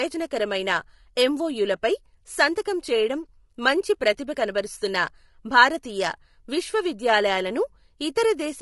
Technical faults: low-delay AAC compression

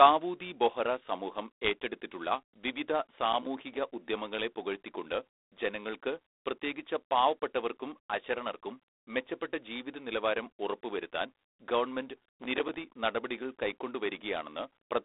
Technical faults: G.726 ADPCM; processor overload crackle

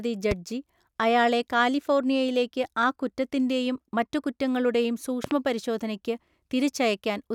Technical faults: loud pop

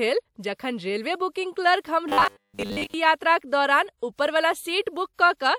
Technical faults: robotic sound from repeated short buffers

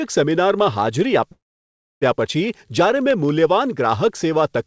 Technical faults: call audio freeze

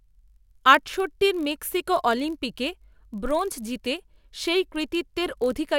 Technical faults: block size mismatch (padded)

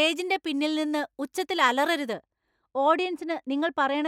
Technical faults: de-emphasis applied wrongly

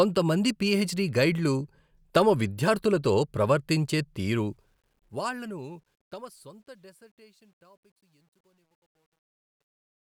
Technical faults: truncation distortion on a fade

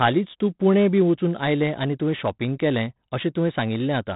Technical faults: 4-bit ADPCM compression

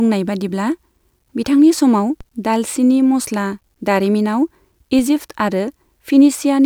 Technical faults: DC step

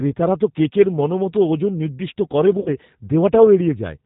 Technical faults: G.729 codec; VoIP packet loss concealed by the speech codec

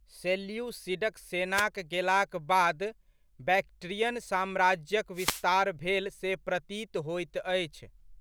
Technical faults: wireless microphone noise hit

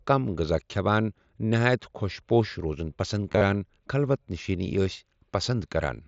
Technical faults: concealed Bluetooth headset packet loss

